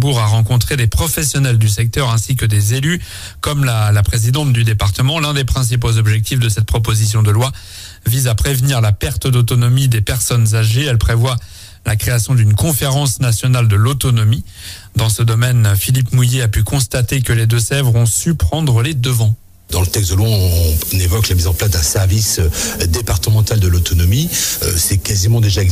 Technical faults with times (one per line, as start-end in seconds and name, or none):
none